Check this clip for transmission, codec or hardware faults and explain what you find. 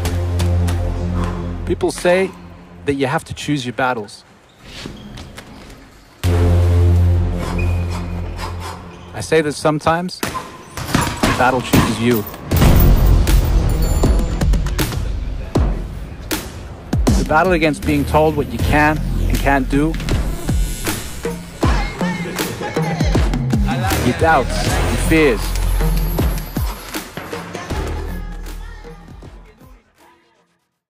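One fault appears near the end. From 28.00 s to 30.90 s, channel delay (comb filtering): one channel lags about 20 ms before mono summing, cutting fixed notches from around 20 Hz upward. It sounds rough or slightly doubled, and the notches stay put, unlike a sweeping flanger.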